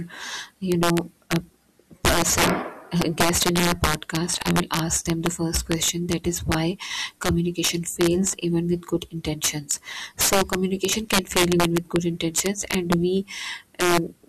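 Speech, with integer overflow throughout: the signal is driven about 10 dB past full scale, and instead of being limited, any sample beyond the largest integer wraps round to the opposite extreme. Only around one percent of samples cross that limit, so the fault sits on the loudest speech peaks as violent, sharp cracks. That separates it from clipping, where peaks are flattened into a buzzy, softer distortion rather than flipped across the full range.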